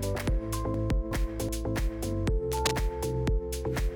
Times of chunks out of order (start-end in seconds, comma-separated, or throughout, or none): 0.74-1.49